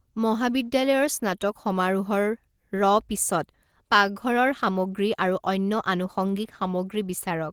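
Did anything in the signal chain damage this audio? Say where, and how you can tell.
No, nothing in the chain damaged it.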